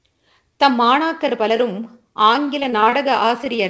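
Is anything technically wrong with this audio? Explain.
Yes. Three packet-delivery faults affect the end of this speech clip, which passes through a call codec whose band stops at 8 kHz, pointing to G.722.

From 2.60 to 2.94 s there is repeated packet loss, heard as a robotic, choppy stretch. Six gaps, the longest 22 ms, were each patched by extending the preceding sound, so about 29% of the span is concealment and 80 ms of real audio is gone. The result is choppy sound with pieces missing. On a spectrogram the harmonics turn flat and repetitive in short blocks, broken by abrupt seams. The waveform shows repeated periodic segments.

At 3.44 s there is a short stall from a late packet. The jitter buffer ran dry, and the receiver stretched the last sound for 18 ms until the packet arrived, then resumed where it had stopped. Nothing is lost, but the sound is held slightly too long, with a slight buzz or dip. 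On a spectrogram this is a short horizontal smear of frozen harmonics. The waveform repeats one cycle shape briefly.

At 3.56 s there is a short concealed packet loss. About 20 ms never reached the decoder in time and was replaced by roughly 19 ms of extrapolated sound, which blends back into the real signal. It is heard as a brief smear or wobble. On a spectrogram the detail blurs into a smooth patch. The waveform shows a smooth blend where the real audio returns.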